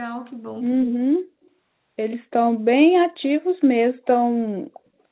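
The speech dips almost to silence from 0.79 to 1.29 s, a drop of about 40 dB lasting half a second, and again briefly at 4.7 s for about 70 ms. This is likely speech suppressed in double talk, where the echo canceller mistook overlapping talk for loudspeaker echo and turned everything down. Short delayed copies of the voice appear at 1.45 s and 2.11 s, each trailing the original by 135 ms. The first is barely audible and the second is noticeably stronger. This points to echo leak, with the far side's canceller failing to remove all of what its microphone picked up from its loudspeaker.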